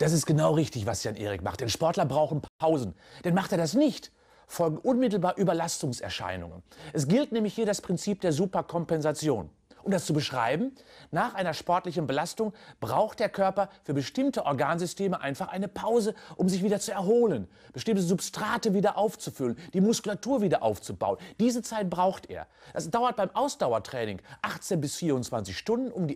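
At 2.48 s the sound cuts to silence for 120 ms, a playback stall likely caused by the player running dry. From 2.60 to 3.40 s comes time-compressed catch-up: the audio runs about 1.15 times fast at unchanged pitch, unlike a plain speed-up, which would raise pitch.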